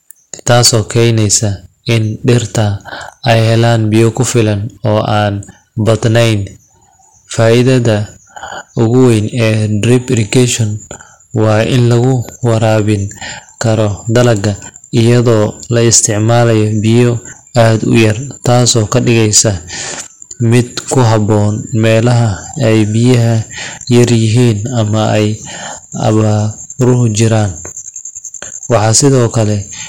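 Hard clipping runs through the whole recording. The speech was driven about 14 dB beyond what some stage in the chain could pass, so the loudest moments hit a ceiling and were sliced flat, with a few percent of the waveform sitting on that limit. The squared-off peaks add harmonics far up the spectrum, giving stressed syllables and louder passages a harsh, crackling fuzz instead of a clean rise in level.

A train of clicks appears from 11.79 to 12.80 s: about five sharp pulses of near-identical shape, arriving at a steady four per second and peaking a few decibels above the speech around them. They tick over the sound as an even, mechanical pattern unrelated to the talking itself. The likely cause is a brief burst of electrical interference or a faulty connection or power supply injecting the same impulse repeatedly.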